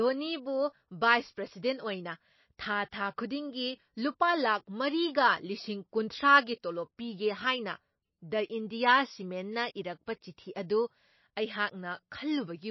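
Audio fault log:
Throughout: MP3 compression, likely. Nothing comes through above about 5.8 kHz, so the speech sounds dull and the s sounds lose their sizzle. There's a watery, swirly texture on top that's easy to hear, and consonant attacks come out smeared. That fits an encoder starved of bits, somewhere around 25 kbps. It chops the treble at a fixed point and drops the weaker frequency lines, and those flicker in and out from frame to frame.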